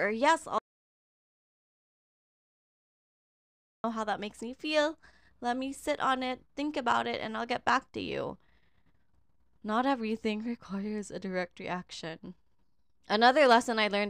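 The input likely dropped out from 0.58 to 3.84 s, an audio dropout to silence: after "or yes", 3.26 s becomes dead silence, resuming at "how that makes me".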